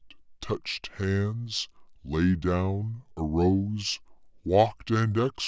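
From start to finish the speech runs slow and low, the signature of a wrong sample rate. The samples are clocked out without conversion at about 0.73 times the original speed, which fits audio captured near 22 kHz being played back at 16 kHz. Pitch and tempo fall together by that same ratio, roughly 5.6 semitones down, so the voice sounds deep, drawn out and sluggish, with every syllable stretched.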